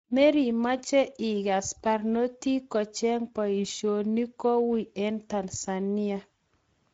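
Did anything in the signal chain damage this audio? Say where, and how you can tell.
Yes. The damage comes from the codec stage, a Speex encoder running across the whole clip. Its CELP coding has too few bits for the excitation, so the speech turns plainly noisy and hoarse, which points to a low bitrate near 17 kbps, and nothing remains above 7.7 kHz.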